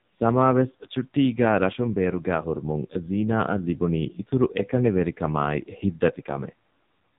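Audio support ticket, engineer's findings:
AMR narrowband mobile codec, whole clip, 0 s onward. Speech band-limited, nothing above 3.8 kHz. Voice buzzy and synthetic, heavy codec damage. Points to a low AMR-NB mode, which fits about 5.9 kbps. Mechanism: vocal-tract model driven by sparse pulses in 20 ms frames, so detail is lost. Component: mobile network leg or a transcode through it.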